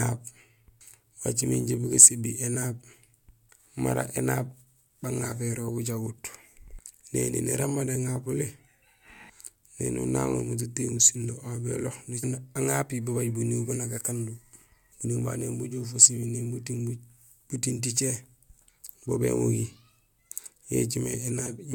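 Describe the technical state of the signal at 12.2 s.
At 12.22 s the speech jumps abruptly forward, with a small blip at the splice, just before "aŋapi babaaj buniiw ban". The break is not a gap of silence but a sudden discontinuity, as if part of the programme has been cut out. The likely cause is a stream segment skipped. One segment of the segmented stream failed to load. The player then carried on from the next segment, dropping that stretch of audio.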